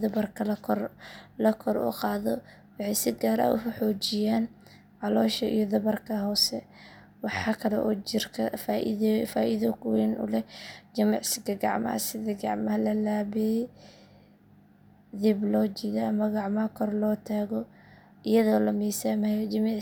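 No audible faults turn up anywhere in the recording on listening.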